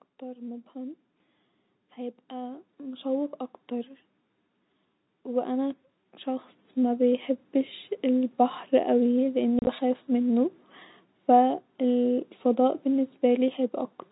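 From 1.75 to 3.99 s, and again from 5.23 to 7.82 s, automatic gain rising lifts everything by about 6 dB and then about 7 dB. The gain control judged the input too quiet. Speech and background swell together, seen as a steadily widening waveform envelope.

At 9.59 to 9.67 s, packet loss filled with silence punches about 50 ms of holes into 80 ms of speech, the longest run 30 ms. Gap sizes point to 10 ms packets. Edges are hard, showing as flat silent stretches and vertical broadband spectrogram lines.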